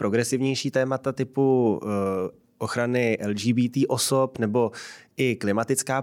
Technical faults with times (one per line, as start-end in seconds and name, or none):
none